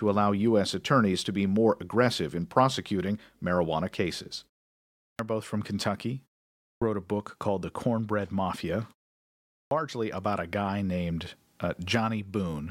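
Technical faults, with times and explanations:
4.89 s, 6.49 s and 9.41 s, clipped start after a pause: speech resumes abruptly after "in prosecuting marijuana cases" and elsewhere, missing about 0.3 s each time, because the output device was slow to wake from silence.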